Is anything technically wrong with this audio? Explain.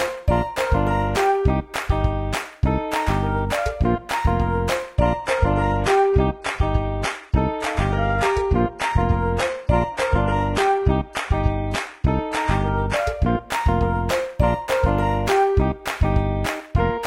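Yes. Adaptive stream at a lower bitrate, 4.96 to 12.96 s: a slowed connection switched playback to a cheaper encoding, so codec artefacts rise and nothing above 11.8 kHz remains, abruptly and without a gap.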